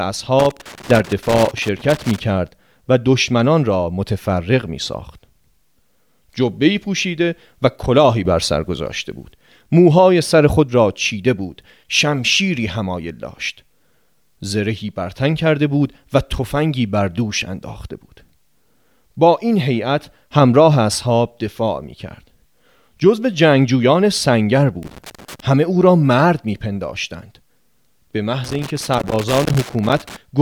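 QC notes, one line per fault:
0.39–2.19 s, loose connector crackle: an irregular burst of scratching as a worn or dirty contact in the signal path makes and breaks contact, chopping the speech into fragments.
24.83–25.40 s, loose connector crackle: a shorter burst from an intermittent contact, chopping the signal as the circuit opens and closes.
28.44–30.16 s, loose connector crackle: a longer burst of the same broken, scratchy chopping.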